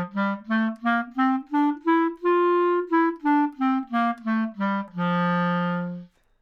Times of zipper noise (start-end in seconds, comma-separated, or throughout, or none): none